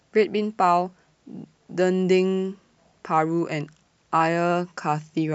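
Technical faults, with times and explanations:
0.12 to 5.29 s, clock slip clicks: two devices are likely running on unsynchronised clocks a few hundred ppm apart, so one sample is dropped or repeated roughly every 70 ms. The resulting series of around seventy slips adds a faint, regular ticking rattle over the speech.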